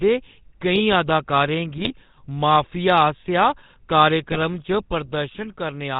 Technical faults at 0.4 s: GSM full-rate codec

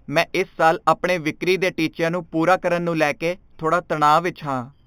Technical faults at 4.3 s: imaging from linear upsampling

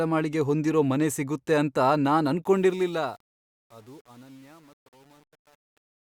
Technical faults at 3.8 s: truncation distortion on a fade

